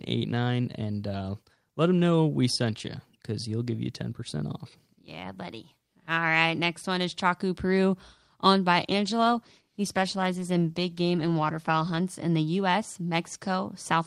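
At 8.9 s a call bitrate drop sets in, lasting until 12.11 s. The speech turns rough and watery. The encoder was given far fewer bits and coded more coarsely. The sound fits a fall from 32 to 16 kbps.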